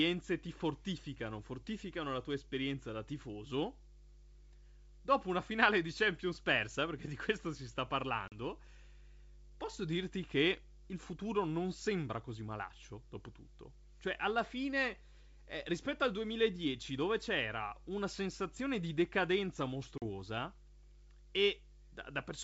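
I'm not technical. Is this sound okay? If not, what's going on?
No. A low, steady buzz sits under the speech the whole time, fairly noticeable. This is mains hum: the 50 Hz electrical supply leaking into the recording, usually through a grounding problem or nearby transformer.

At 8.28 to 8.36 s and 19.98 to 20.03 s the sound abruptly cuts out, then returns slightly distorted. This is packet loss on an ADPCM call. About 40 ms of audio, a couple of data chunks, went missing each time, and the receiving end briefly lost track before catching up.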